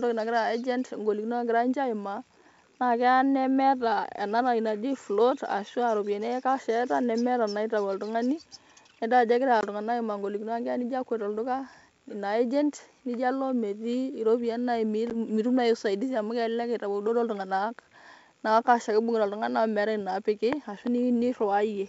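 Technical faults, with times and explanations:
9.61 s and 15.10 s, packet loss on an ADPCM call: hard-edged silent holes of about 20 ms and 10 ms (roughly two packets, then one). Unlike a simple dropout, the speech resumes with slight, brief distortion, because the decoder's predictor and step size have drifted from the sender's. It settles within tens of milliseconds against the clear G.722 wideband sound.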